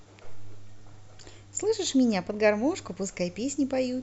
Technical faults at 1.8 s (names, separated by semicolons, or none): channel delay (comb filtering)